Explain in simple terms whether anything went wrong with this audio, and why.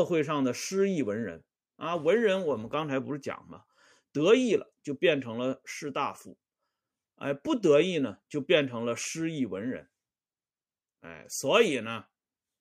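Nothing went wrong here; the speech comes across steadily the whole way, with no glitches, dropouts or odd noises to point to.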